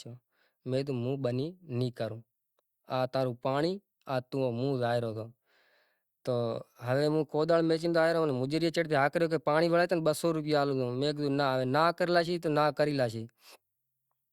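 No technical faults can be heard anywhere in the recording. There is nothing in the speech that calls for a timestamp or further comment.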